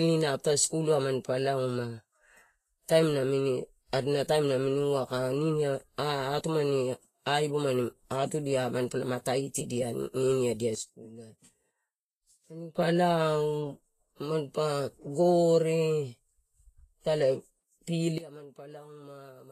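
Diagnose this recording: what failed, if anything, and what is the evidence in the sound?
The codec stage is the likely cause of the damage heard throughout this speech: the spectrum stops at 14.2 kHz and the treble is grainy and hissy, consistent with Vorbis compression at a rate around 31 kbps, where coarse quantisation of the residue turns fine detail into noise.

Two sudden gain jumps point to a digital gain stage changing level without a ramp. From 10.75 s to 12.75 s, speech and background drop together by about 12 dB, dropping just before "lao manpa". From 18.18 s to the end they drop by about 18 dB. A gain setting applied at a single sample is the likely mechanism.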